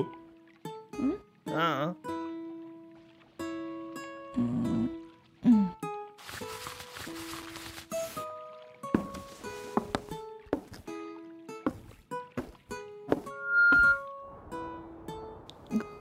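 Loudspeaker feedback squeal runs from 13.30 to 14.06 s. A microphone is picking up the loudspeaker it drives, and at 1.4 kHz the loop's gain rises above unity, so that frequency keeps reinforcing itself on every pass. It swells from nothing into a piercing single tone in roughly a third of a second, ending up around 15 dB louder than the surrounding audio, and then cuts off.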